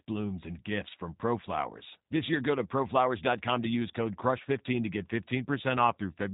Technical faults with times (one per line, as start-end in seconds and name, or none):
0.00-6.33 G.729 codec